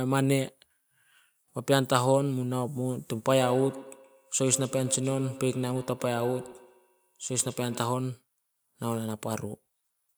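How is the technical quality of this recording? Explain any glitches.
The recording has one clear fault. From 3.26 to 8.13 s, speech returns in ringing repeats roughly a tenth of a second apart, peaking about 14 dB down. This is feedback echo between two devices, each replaying the other's microphone.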